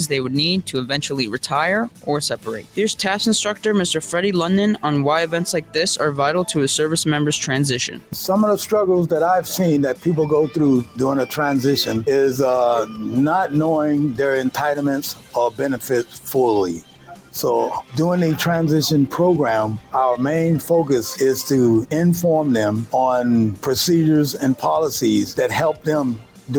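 A noise suppressor built for speech has been left on across the whole thing, so the noise suppressor applied to music or sounds keeps mistaking sustained material and ambience for noise. Attacks punch through fine, but anything held or decaying gets pulled down, and the level wobbles by something like 10 dB as it grabs and releases. You hear it as a pumping, fluttery thinning whenever the sound settles rather than hits.

On top of that there are moments of sound cut by the noise suppressor, where it clamps harder than usual: 1.89 to 2.78 s, 5.6 to 5.75 s, 7.88 to 8.15 s, 10.84 to 10.99 s, 15.14 to 16.28 s, 16.74 to 17.35 s, 19.79 to 19.94 s, and 25.73 to 26.51 s. The dips run about 10 to 12 dB down, deepest around 16.7 s and near the end. Tails get chopped short and steady parts sag, while anything sudden mostly survives.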